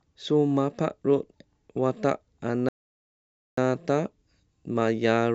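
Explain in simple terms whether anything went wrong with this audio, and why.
Something did go wrong: a playback stall. At 2.69 s the speech cuts out mid-flow and the output goes completely silent until 3.57 s, a gap of about 0.89 seconds, before the talking carries on. The most likely cause is that the player briefly ran out of audio data to send, or was held up by other work on the device, so it had nothing to play until it caught up.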